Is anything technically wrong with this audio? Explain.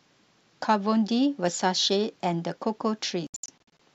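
Yes, there is a digital broadcast dropout from 3.27 to 3.8 s. The receiver muted on corrupted frames, punching short silent holes, the longest 72 ms, totalling about 288 ms across roughly 530 ms. Speech stutters out and back. The waveform shows flat gaps, and the spectrogram shows blank vertical strips.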